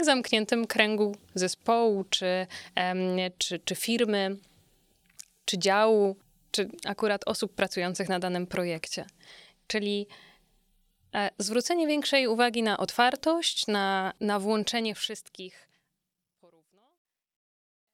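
No technical fault can be heard in this speech recording, whose level holds steady until an editor-style fade-out that begins at around fourteen and a half seconds and eases smoothly down to silence by 17.9 s.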